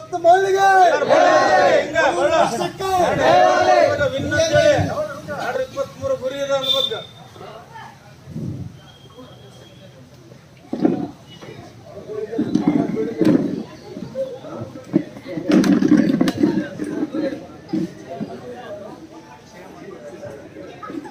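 The audio lurches forward at 1.49, 2.81–2.84, 3.97–4.02, 5.55, 14.03–14.06 and 20.45 s, each dropping roughly 70 to 200 ms. These are compressed frames skipped: whole frames, which fit a 20 ms frame length, went unplayed, so the audio jumps ahead at each join.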